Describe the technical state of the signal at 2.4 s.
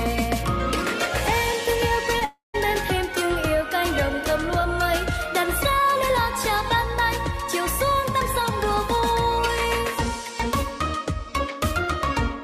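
At 2.4 s the sound has broken off. From 2.25 to 2.56 s the last moment smears into a fading buzz, then about 140 ms of silence, and the audio resumes with a stretch missing. The likely cause is a long network dropout: about 300 ms never arrived, and the receiver papered over the gap.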